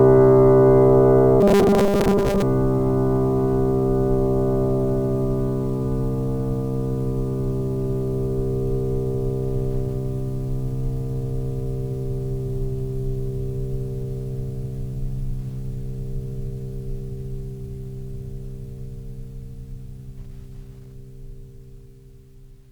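From 1.41 to 2.42 s the music turns into robotic sound from repeated short buffers, a stiff metallic buzz at 200 Hz. That likely comes from audio arriving too slowly, so a tiny chunk of about 5 ms gets looped for most of that stretch.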